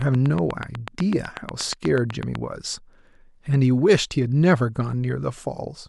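A train of clicks runs from 0.02 s to 2.36 s: about twenty sharp, near-identical pulses at a steady 8.1 per second, each rising to roughly 10 dB above the speech. They tick evenly over the talking and through its gaps. Because the spacing is so regular and the shape repeats, the likely source is a periodic disturbance, such as electrical interference from nearby equipment or a faulty connection or power supply.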